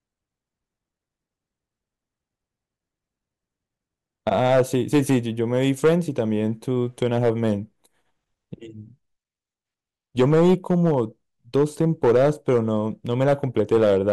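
Harsh, buzzy distortion sits on the louder stretches of this speech, with the peaks breaking into a gritty fuzz from 4.27 to 5.17 s, 5.54 to 6.20 s, 7.02 to 7.52 s, 10.19 to 11.00 s, and from 11.55 s to the end. This is hard clipping: the level was driven about 7 to 8 dB past what the stage could pass, so the waveform's peaks were sliced flat, and those squared-off tops spray added harmonics high into the spectrum.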